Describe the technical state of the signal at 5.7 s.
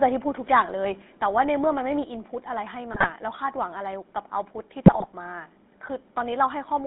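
At 5.7 s, as throughout the speech, the GSM full-rate codec's pulse-driven vocal-tract model gives a plainly audible buzzy, gravelly roughness, with the band confined to roughly 200 Hz to 3.7 kHz.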